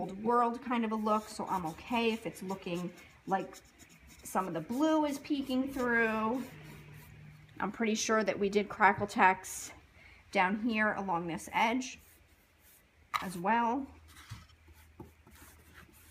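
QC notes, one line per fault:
No faults found on review; nothing to log.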